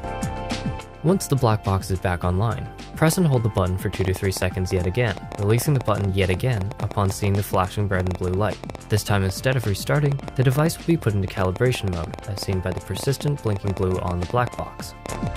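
From 3.08 s right through to 15.28 s there's a train of clicks, roughly nine a second at an uneven pace, around a hundred in all and peaking well above the sound. It's likely interference or a faulty connection or power supply, and you hear the ticking in the gaps too.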